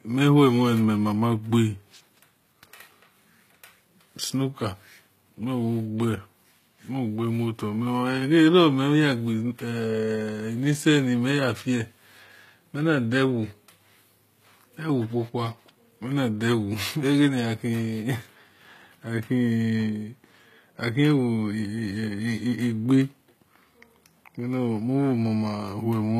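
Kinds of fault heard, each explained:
HE-AAC compression: the speech sounds plainly coded all the way through. The top end is synthetic, so s sounds come out gritty and a bit lispy. That's likely spectral band replication copying lower bands upward, which fits a bitrate around 20 kbps.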